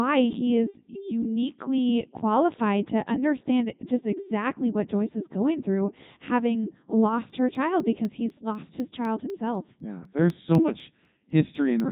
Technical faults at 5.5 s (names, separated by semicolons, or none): Codec 2 vocoder